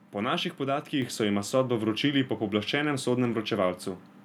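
At 1.02 s there's a microphone volume step-up: the call software decided the mic was too quiet and bumped the input gain by about 4 dB in one go, so the speech and the background noise both jump louder together, right at that instant.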